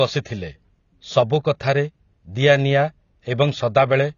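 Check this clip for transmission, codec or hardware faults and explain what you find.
One codec fault runs through the whole clip. The speech is dull and smeared, with nothing above 6.9 kHz and fizzy sibilants. It is likely AAC compression, starved at around 24 kbps.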